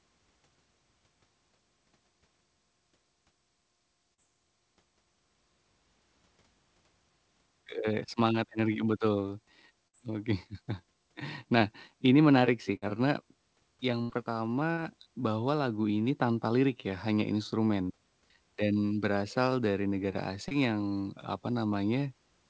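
Speech carried over a WebRTC call path, with nothing above 8 kHz, which fits a wideband codec such as G.722, suffers two kinds of network fault. Short concealed packet loss occurs at 4.14–4.20 s, 11.59–11.62 s, 14.73–14.79 s and 20.48–20.53 s: between 20 and 40 ms of audio failed to reach the decoder in time, and the receiver patched each hole by extending the preceding sound before blending back, leaving a brief smear or wobble. A burst of packet loss hits at 9.88–9.95 s, 12.76–12.84 s and 14.02–14.11 s, where 60 to 80 ms went missing in a row. The receiver stretched the last sound while fading it out, so each gap becomes a held buzz or dying hiss, and the speech resumes further along with that stretch gone.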